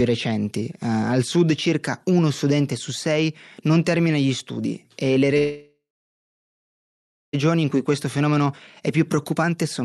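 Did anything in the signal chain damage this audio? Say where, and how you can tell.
Yes, the network and jitter-buffer stage of the call path damaged it. At 5.37 s, right after "gli studi e le", the sound stops advancing. The last sound carries on briefly as a fading buzz, then about 1.5 s of silence follows, and at 7.35 s the speech resumes exactly where it left off. This is a call audio freeze, likely caused by packets stalling in transit until the jitter buffer ran dry. It inserts a gap of about 2 s without losing any audio.

From 7.54 s to the end of the clip there is a jitter buffer speed-up. After the stall the buffer held more audio than its target, and the receiver worked it down by cutting out short pitch-period slices many times in a row, roughly 0.4 s in total. The speech therefore runs at about 116% speed while its pitch stays unchanged, so it sounds hurried rather than higher.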